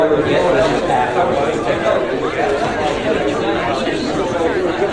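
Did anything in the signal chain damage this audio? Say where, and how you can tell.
No, nothing damaged this audio.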